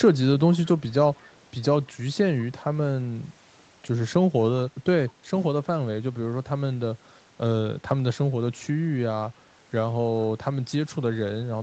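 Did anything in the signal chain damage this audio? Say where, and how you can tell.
Yes, in the call processing. Between 0.54 and 0.69 s, and again from 1.16 to 1.23 s, there's a faint delayed copy of the speech trailing about 196 ms behind, roughly 30 to 35 dB down. That's an echo leak, likely a far-end speakerphone whose echo canceller let some of its loudspeaker pickup slip back down the line.

Also call processing: at 5.14 to 5.25 s the room tone dips by about 6 dB for roughly a tenth of a second, then comes back. That's background gated by the echo canceller, which ducked the microphone hard while the loudspeaker was playing and released it afterward.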